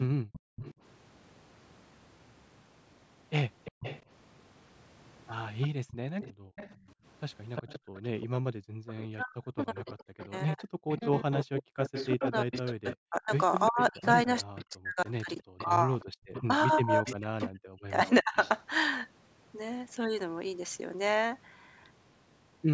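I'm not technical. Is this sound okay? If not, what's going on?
No. On the other end of the call, a loudspeaker's echo canceller is struggling, and that causes three problems.

Echo leak: the canceller likely failed to fully remove what the microphone picked up from its own loudspeaker, so that sound was sent back. You hear a fainter copy of the speech about a third of a second late, at 0.33 to 0.74 s, 3.64 to 4.02 s, and 5.61 to 18.5 s.

Background gated by the echo canceller: while the loudspeaker played, the canceller turned the microphone down hard. The room sound drops out to near silence for brief moments at 0.22 to 0.56 s, 5.7 to 6.51 s and 7.79 to 8.86 s, then comes back.

Speech suppressed in double talk: when both sides talked at once, the canceller likely could not tell its own talker from the echo. It turned everything down, so the talker's speech dips sharply for a split second at 6.79 to 6.85 s. 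Between 9.14 and 18.35 s it cuts out in pieces that add up to around four seconds.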